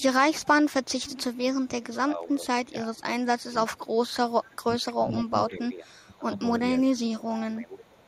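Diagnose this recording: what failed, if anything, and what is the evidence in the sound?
Echo leak at the call-processing stage: a faint copy of the speech returns about 516 ms late, around 25 to 35 dB below it, from 0.0 to 1.96 s, 3.77 to 4.94 s, 5.49 to 6.04 s and 6.98 to 7.05 s. The likely cause is a far-end echo canceller not fully removing its loudspeaker pickup.

Speech suppressed in double talk, also in call processing: the talker dips by up to about 20 dB across 2.05 to 4.01 s, and by about 15 dB across 4.62 to 8.06 s, roughly three seconds in total. This is likely the echo canceller ducking the near talker during overlapping speech.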